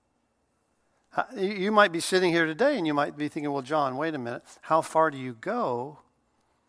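No technical faults can be heard anywhere in the recording. There is nothing in the speech that calls for a time or a fault description.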